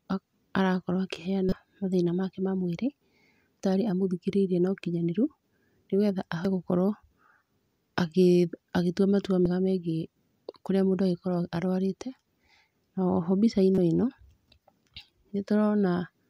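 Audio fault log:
1.49–1.53 s, 3.60 s, 6.45 s, 9.46 s and 13.74–13.78 s: damaged data in a compressed stream. Short chirps and blips cut into the speech, just before "mathĩna make ma mwĩrĩ" and "o ĩno". Corrupted bytes make the decoder misread frames, lose sync and jump to the next frame header.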